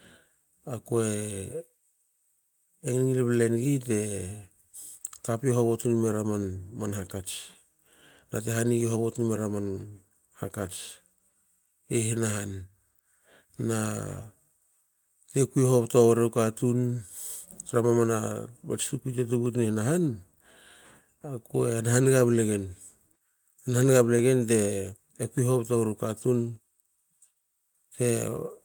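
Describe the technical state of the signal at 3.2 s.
Clock drift buffer slips run through 3.2 s, part of a pattern spanning 0.52 s to 27.74 s and recurring every 1.18 s, about twenty times in all. A click or pop appears in the speech at each step. The likely cause is two devices running on separate clocks that disagree by roughly a few hundred parts per million, so the buffer between them creeps until a short block of around fifteen samples is dropped or repeated.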